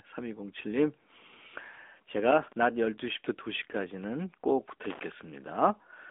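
From start to finish the speech carries the sound of the AMR narrowband mobile codec. Energy stops at about 3.7 kHz, and the usable band runs from roughly 250 Hz to 3.5 kHz. The voice is rebuilt from a vocal-tract model driven by a sparse pulse excitation, so it comes through buzzy and synthetic. The codec damage is plainly audible, and the texture fits a mid-rate mode of about 10.2 kbps.

From 4.84 s to 5.04 s there is a loose connector crackle, a burst of irregular scratching that lasts about 0.2 s. During that window a contact in the signal path keeps breaking and remaking. Each break chops the waveform. The result is a rough, uneven spatter over the speech rather than a single clean dropout.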